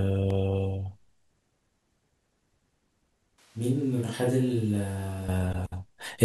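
A block of digital silence at 0.30 s interrupts this speech clip for under a millisecond, which fits a 32-sample buffer that was not filled in time. The waveform drops straight to silence and comes back with no fade, so the two hard edges merge into a single brief tick. A switch to a distant microphone follows from 3.38 to 5.28 s. The voice suddenly turns roomy and hollow, with thinner low end, and drops by around 10 dB, while room noise rises to roughly 30 dB below the speech. The likely cause is that the close microphone's feed dropped out and a farther pickup, such as a camera microphone, filled in. At 5.28 s the close sound returns just as abruptly.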